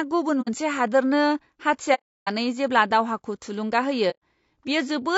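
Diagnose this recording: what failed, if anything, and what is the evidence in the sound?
The codec stage: the speech is rough and grainy all the way through, with plainly audible damage, likely from low-delay AAC compression at a low bitrate around 32 kbps.

The network stage: AAC frame loss with muting leaves soft-edged holes at 0.41–0.49 s, at 1.94–2.28 s just before "जेब्ला दावहाखौ थुलुंगा", and at 4.10–4.20 s just after it. The decoder zeroes the missing frames and fades around each gap.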